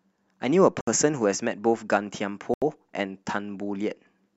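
A likely Bluetooth stall, with radio interference holding up packets until the headphones' buffer emptied, interrupts this speech clip twice. Playback simply halts: the sound drops to silence from 0.81 to 0.87 s, a gap of 64 ms, and again from 2.54 to 2.62 s, lasting 81 ms. Each time the audio resumes once the resent packets arrive, leaving a brief hole in the speech rather than any distortion.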